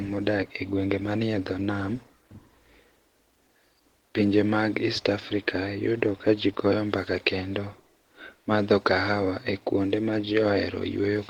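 Throughout the clip the speech carries plainly audible coding damage: a hoarse, somewhat muffled and grainy texture, even though the bandwidth stays full and content reaches up to about 20.2 kHz. The cause is likely Opus compression running in its hybrid speech mode, at a low bitrate that fits about 16 kbps.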